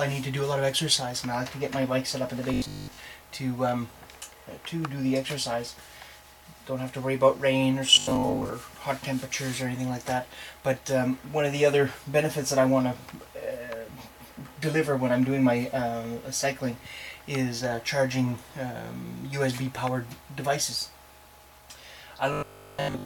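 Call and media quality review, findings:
Robotic sound from repeated short buffers at 2.54–2.98 s, 7.95–8.49 s and 22.33–23.05 s. Rigid metallic 50 Hz buzz over most, about half, then all of each span. Likely playout underrun: a 20 ms chunk looped while incoming audio was skipped.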